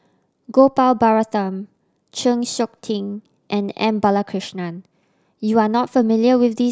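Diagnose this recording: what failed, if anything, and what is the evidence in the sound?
Nothing failed, and the sound gives no evidence of a fault at any stage of this recording.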